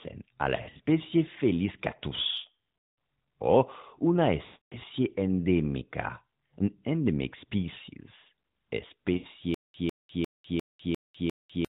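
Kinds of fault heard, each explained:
Lost AMR speech frames: radio errors corrupted speech frames, so the decoder stretched the last good pitch and vocal tract settings with falling gain. Around 0.56 to 0.81 s the losses are scattered in short runs, giving dips and warbles. At 2.78 to 2.96 s and 4.46 to 4.77 s the sound drags, thins and fades before speech returns weak or rough.
Stutter with silent gaps: from 9.54 s to the end, a burst about 150 ms long repeats six times, once every 350 ms, with about 200 ms of digital silence between repeats. This is likely a stalled stream replaying its last fragment and then running dry, and the audio that belonged in that stretch is missing.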